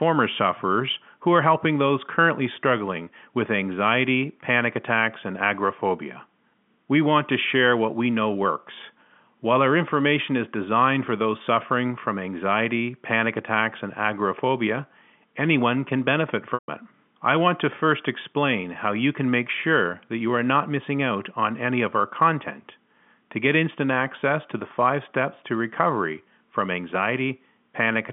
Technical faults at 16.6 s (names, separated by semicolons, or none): packet loss with pitch repetition